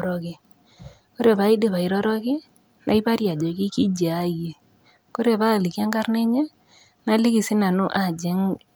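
No technical faults can be heard anywhere in this speech recording. There are no events to place on the timeline.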